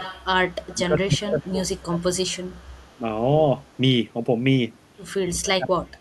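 From 0.00 to 0.25 s, 0.51 to 0.75 s and 2.00 to 2.95 s, a faint copy of the speech trails it by 147 ms, about 15 dB down at first and fading to about 35 dB down. This is echo leak, likely from a speakerphone whose echo canceller let some of its microphone pickup back through. Between 0.72 and 2.04 s, and from 5.22 s to the end, the speech sinks by up to about 30 dB and then about 35 dB, breaking up over roughly a second and then most of the final stretch. This is speech suppressed in double talk, likely because the canceller could not separate its own talker from loudspeaker echo while both spoke, so it turned both down.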